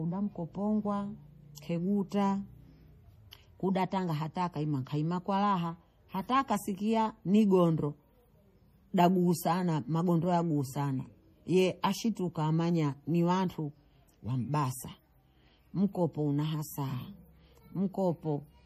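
Throughout the speech, the treble stops dead at 15.2 kHz and the upper band has a watery, swirling texture, with weak detail flickering on and off. This is likely MP3 compression at a low bitrate, consistent with roughly 40 kbps, where bits run short.

Pre-echo occurs from 1.55 to 1.58 s, a 27 ms smear, and again at 3.31 s. Before each sharp onset a brief hiss leads in, because the codec spread quantisation noise across the whole block, including the quiet moment before the attack, softening it.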